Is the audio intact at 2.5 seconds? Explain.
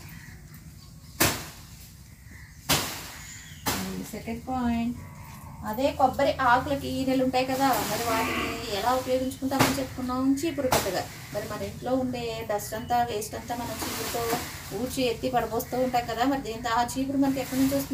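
Yes, the audio is intact at 2.5 seconds, with no fault audible at that moment.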